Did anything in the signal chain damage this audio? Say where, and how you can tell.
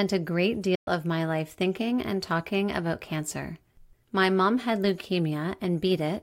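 Yes, at the playback stage. From 0.75 to 0.88 s the speech cuts to silence for about 116 ms, then resumes on "of my life thinking" with the lost stretch skipped rather than delayed. This is likely a Bluetooth dropout: packets missed their deadline on the wireless link to the headphones and were discarded, a gap that fits around five lost packets. VoIP packet loss would typically be concealed or smeared, but this hole is clean silence and the timeline never stalls.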